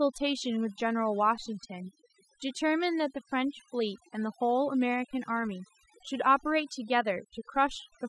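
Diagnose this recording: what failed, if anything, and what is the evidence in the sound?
Overdone noise removal, throughout: over-aggressive suppression leaves near-silent gaps with twinkling specks.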